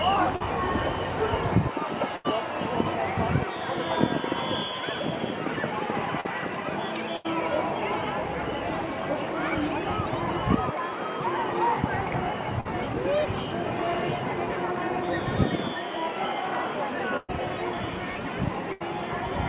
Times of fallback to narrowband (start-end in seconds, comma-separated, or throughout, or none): none